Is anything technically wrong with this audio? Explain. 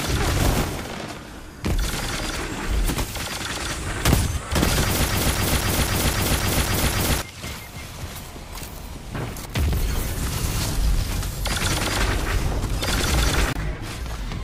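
Yes, there's a broken-record loop from about 5.10 s to 7.22 s. A short chunk of sound, roughly 0.26 s long, repeats exactly and back to back eight times, giving that stuck, stuttering effect. It's likely that the player, encoder or stream stalled and kept resending the last fragment it had buffered. Whatever should have played during those two seconds is gone, so the audio jumps straight on once the loop releases.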